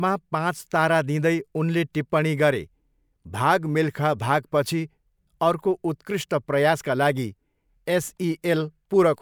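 Speech recording; no technical faults can be heard.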